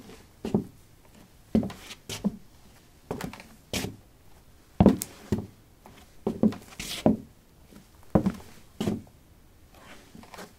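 No technical faults are audible anywhere in this audio.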